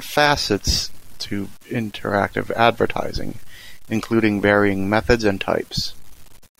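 A speech recording with grainy, gritty distortion from start to finish. The grain tracks the sound, roughest in quiet passages and fading edges. It sits roughly 30 dB below the signal. The likely cause is low bit depth without dither, with samples rounded to about 8 bits.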